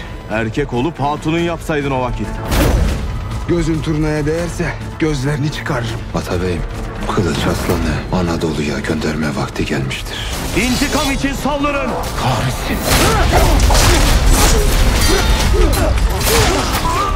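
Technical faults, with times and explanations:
Throughout, computer activity noise: there's a pulsing buzz, chirp or scratch at a rate of around 1 kHz, sitting roughly 30 dB below the signal. It comes from the machine itself. As the processor, graphics card or mouse change their load, current swings disturb the ground shared with the audio circuit. So this noise rises and falls with what the computer is doing, not with the sound being recorded.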